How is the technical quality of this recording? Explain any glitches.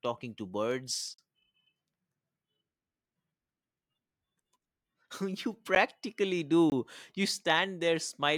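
The recording has three dropouts, each a block of digital silence. The first runs from 1.14 to 1.18 s, about 43 ms, a short hole. A tick falls at 5.75 s, about 11 ms. Another gap spans 6.70 to 6.72 s, about 21 ms. The speech cuts out and back with no fade. The three lengths fit buffers of 2048, 512 and 1024 samples. The program likely failed to fill its output buffer in time.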